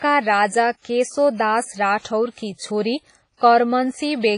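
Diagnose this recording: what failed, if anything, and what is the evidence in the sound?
Codec stage: the speech sounds ringing and washy throughout, hiss breathing with it, nothing above 10.1 kHz. Likely heavy WMA compression, fitting roughly 24 kbps.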